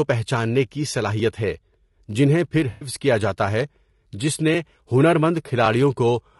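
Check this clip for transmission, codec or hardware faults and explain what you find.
Two faults stand out in this speech clip: a rough, grainy coding character across the whole recording, and one brief dropout patched over by the decoder.

Low-delay AAC compression runs throughout. The voice sounds grainy, with a noisy haze between the pitch harmonics and a thin, synthetic-sounding top band. The likely cause is AAC-ELD, the short-frame codec used in video calls, running at a low bitrate that fits roughly 32 kbps. Its frames of about 20 ms resolve harmonics poorly, so the bits run short and noise fills the gaps. Ordinary low-bitrate coding with longer frames tends to sound swirly or watery instead.

AAC frame loss with concealment occurs between 2.71 and 2.89 s, after "جنہیں پھر" and before "کیا جاتا ہے". About 100 ms of audio went missing, which fits five lost frames. The decoder rebuilt that stretch from the last good spectrum, leaving a smeared, noisy patch. 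A plain packet dropout would cut to silence, but here the gap is filled with sound.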